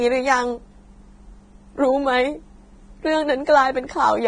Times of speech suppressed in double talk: none

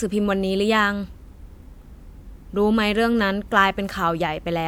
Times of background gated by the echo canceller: none

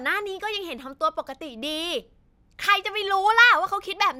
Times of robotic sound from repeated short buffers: none

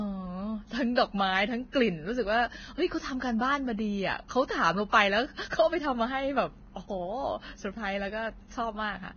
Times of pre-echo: 5.50-5.52

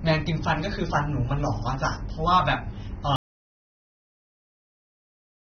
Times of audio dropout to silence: 3.16-5.55

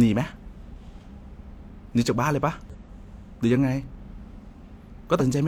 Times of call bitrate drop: none

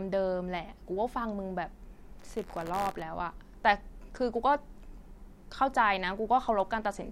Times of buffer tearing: 2.18-3.02

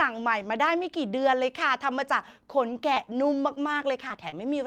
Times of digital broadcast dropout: none

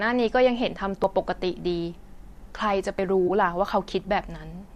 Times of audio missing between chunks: 1.04, 2.99

